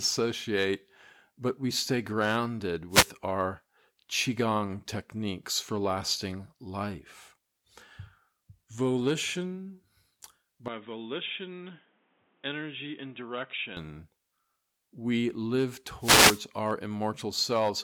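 Speech with two wireless microphone noise hits and one stretch that sounds like a switch to a poorer input. Right after "but we stay grounded", from 2.90 to 3.08 s, a short swish of static washes over the sound, and a longer one follows "we live" from 16.00 to 16.42 s. These come from the analogue FM radio link fading as reflected signals cancel, letting receiver hiss surge up. They differ from a digital dropout because the sound is covered by noise rather than cut to silence, and it returns without a gap. Between 10.68 and 13.77 s the audio turns dull and boxy, with nothing above 3.8 kHz, the level drops by about 5 dB, and a different background noise appears about 35 dB below the speech. This is likely the input switching to a poorer device, such as a headset's call profile. There is no silence at either edge. Unlike an equaliser or filter change, the tone, level and noise floor all shift together and then snap back.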